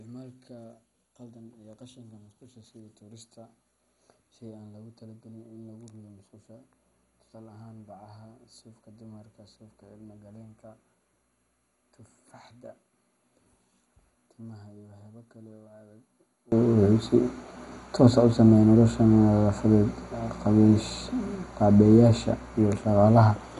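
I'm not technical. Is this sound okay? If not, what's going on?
No. Until about 16.5 seconds, the speech nearly disappears and what's left is only a faint copy, which points to one channel inverted: one side of the stereo pair is likely flipped upside down, so the two sides cancel each other. A plain volume drop would sound quieter but still full.

Throughout, the speech also sounds dull, with a gurgling, grainy texture that shifts as it goes. That is MP2 compression, likely from heavy squeezing of the file. This flickering roughness, not just muffled sound, is what sets it apart.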